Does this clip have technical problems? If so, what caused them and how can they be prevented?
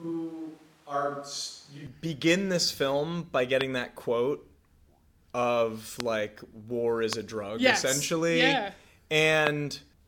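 Yes. From the start until 1.87 s the speech sounds hollow, roomy and thin, about 5 dB quieter with audible background noise, then snaps back to full presence. This is the switch to a distant microphone, likely because the close mic's signal dropped out. Checking the close mic's cable, battery and record routing before each take prevents this.

Sharp, isolated loud pops land at 3.61, 6.00, 7.13 and 9.47 s, each standing well clear of the speech, the last slightly stronger. They are likely voltage spikes from a loose connector, a switch or static. Securing connectors, avoiding switching during recording and grounding equipment prevents them.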